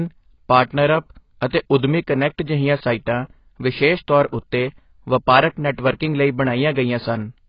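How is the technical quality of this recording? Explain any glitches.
The technical quality is poor throughout. AAC compression, throughout the clip: the speech is dull and smeared, with nothing above 5.1 kHz and a watery, fizzy texture on sibilants. The likely cause is heavy AAC-LC coding at a very low rate, around 16 kbps, which drops the upper band and starves the remaining frequencies of bits.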